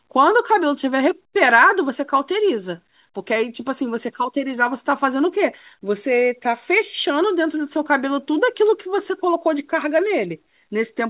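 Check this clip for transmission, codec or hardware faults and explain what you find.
One fault stands out: pre-emphasis left on, from 0.78 s to 4.16 s. The treble lift matches the CD 50/15 µs emphasis curve, and the matching de-emphasis was never applied, so upper frequencies sit about 8 dB too high by 10 kHz relative to 1 kHz. The call path's G.711 A-law coding removes everything above 4 kHz, so the audible effect is a rising tilt toward that ceiling: thin, bright, sibilant speech. A bright microphone or EQ would colour the whole clip, but this switches on and off.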